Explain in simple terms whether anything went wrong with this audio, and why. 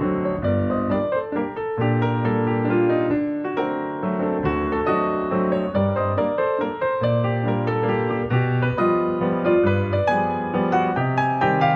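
Nothing went wrong here as far as I can hear; there are no glitches, dropouts or odd noises anywhere in the recording.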